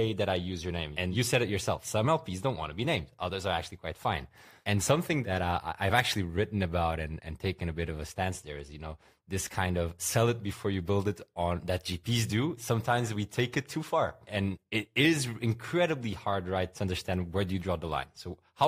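Nothing stood out on listening to the speech in this recording.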